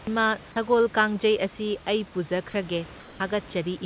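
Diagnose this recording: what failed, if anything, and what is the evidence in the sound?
The call-processing stage likely switched to discontinuous transmission during a pause, so the receiver generated comfort noise in place of the background from 3.0 to 3.2 s. For those 200 ms, the real room tone, which otherwise sits about 22 dB below the loudest speech, gives way to a smooth, featureless synthetic hiss about 4 dB quieter. The genuine background then returns. Throughout the clip nothing reaches above 4 kHz, consistent with the narrowband call codec.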